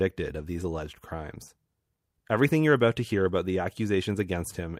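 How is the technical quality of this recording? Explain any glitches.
Nothing in this bit of speech trips the ear as a glitch; it's a smooth, uneventful listen with nothing to flag.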